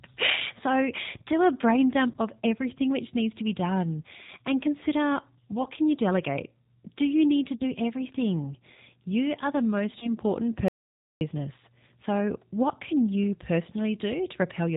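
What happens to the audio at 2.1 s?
A packet went missing in transit, and the G.729 decoder covered the gap with VoIP packet loss concealment. Between 2.11 and 2.17 s, after "so do a brain" and before "of everything which needs", about 30 ms of audio never arrived, consistent with one lost packet. The decoder kept repeating its last pitch and vocal tract filter at falling gain. The result is a short buzzy or noisy smear that fades, and the following frames stay weak or distorted as the predictor recovers.

The same moment also carries the damage from the G.729 codec that runs through the whole clip. The speech is rebuilt from a filter, a pitch predictor and a few pulses per frame, and the band is cut at 4 kHz. This gives a muffled, slightly rough and synthetic quality, plainly audible here and consistent with the 8 kbit/s G.729A coder.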